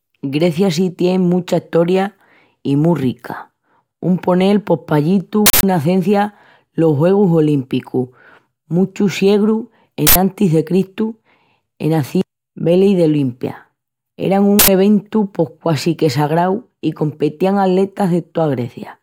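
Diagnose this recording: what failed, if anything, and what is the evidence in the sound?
Uninitialised buffer at the driver or buffer stage: blocks went out to playback before any audio had been written into them, so stale memory contents were played as samples. The speech is interrupted by three loud bursts of digital noise: 5.46 to 5.63 s, between "ponel pos pallí" and "nacencia los"; 10.07 to 10.16 s, right after "muchus siegrus"; and 14.59 to 14.68 s, just before "eventu pos quasi que". Burst lengths of about 171 ms and 85 ms fit whole 8192- and 4096-sample blocks.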